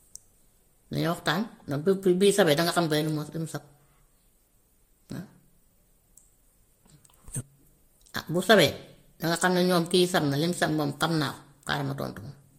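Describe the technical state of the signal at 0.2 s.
At 0.2 s, as throughout, the speech carries two overlapping layers of coding artefacts with nothing above 16.5 kHz, likely from transcoding between lossy codecs, pointing to MP3 re-encoded as Vorbis.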